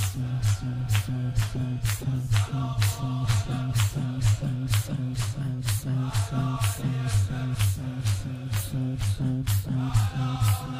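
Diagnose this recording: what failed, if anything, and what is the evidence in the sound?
Nothing failed; no stage in the chain shows trouble.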